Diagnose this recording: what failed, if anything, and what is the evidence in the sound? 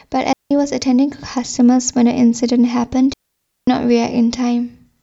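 A digital wireless dropout at the radio link, before any recording stage, cuts the speech twice: a clean hole from 0.33 to 0.51 s (about 0.18 s) and a longer one from 3.13 to 3.67 s (about 0.54 s). The receiver lost too much of the data stream and muted with a very quick fade, leaving near silence. There is no hiss or crackle on either side of the gaps, which rules out an analogue wireless dropout's squelch noise.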